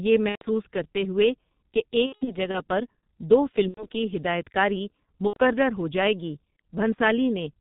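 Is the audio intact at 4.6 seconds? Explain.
No. At 4.6 seconds the speech is affected by the G.723.1 codec, which degrades the clip from start to finish. This low-rate telephony coder discards everything above 4 kHz and models the voice in coarse 30 ms frames that adapt slowly. The damage is heavy, consistent with a stream around 6.3 kbit/s. At this moment the speech sounds muffled and hoarse, and its consonants are smeared rather than crisp.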